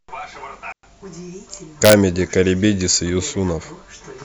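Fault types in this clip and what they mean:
Digital wireless dropout: the wireless link lost too much data and the receiver muted itself, leaving a clean hole of near silence in the speech from 0.72 to 0.83 s, about 110 ms long, with no noise burst at either edge.
Integer overflow: peaks pushed past the largest representable integer, here by about 2 dB, and wrapped to the opposite sign instead of being limited. Between 1.85 and 1.93 s this produces harsh, violent cracks on the loud speech, far sharper than ordinary clipping.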